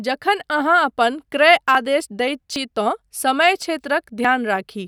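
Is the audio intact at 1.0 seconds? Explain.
Yes, at 1.0 seconds the speech runs through cleanly, with no dropout, click, distortion or other fault to be heard at that point.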